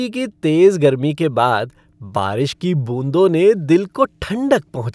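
Nothing technically wrong turns up anywhere in this bit of speech, so there are no times or causes to point to.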